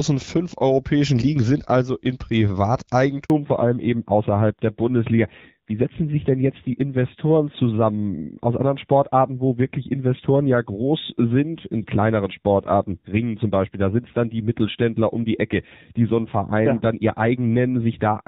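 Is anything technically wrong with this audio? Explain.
Yes, there are two faults. At 3.24 s a handover gap cuts the speech for 60 ms as the call switches networks and no frames arrive. The waveform shows a brief flat line, and the spectrogram shows a thin blank vertical strip. From 3.30 s to the end, a fallback to narrowband removes everything above 4 kHz. The change in sound points to a drop from AMR-WB at 12.65 kbit/s to AMR-NB at 7.4 kbit/s. Before the switch the wideband sound is clear, with light codec damage. After it the audio turns duller and rougher, and the spectrogram shows a sharp horizontal ceiling at 4 kHz.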